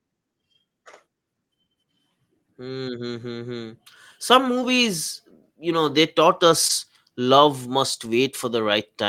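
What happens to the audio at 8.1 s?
Right after "love must", from 8.05 to 8.07 s, a lost packet is rebuilt from error correction: a coarse low-bitrate copy fills the 20 ms, so it sounds briefly rougher and noisier rather than dropping out.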